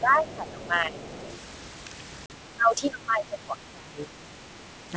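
From 0.0 to 1.05 s the talker's level dips by about 10 dB in places. This is speech suppressed in double talk, likely because the echo canceller could not separate the near talker from loudspeaker echo and turned both down. Within and just after that stretch, at 0.19 to 0.33 s and again at 1.03 to 1.37 s, the other side's voice leaking through is faintly audible, about 25 dB below the speech, as scraps the canceller likely left in the microphone signal. At 2.26 to 2.31 s, packet loss on an ADPCM call cuts a hard-edged 40 ms hole. That length fits two lost packets. The decoder's predictor and step size fall out of step with the sender's, so the speech comes back slightly distorted before it settles. The suppression returns more heavily from 2.56 to 4.14 s, with the level pulled down by up to about 20 dB. It happens again briefly at 4.88 to 4.93 s, a dip of about 10 dB.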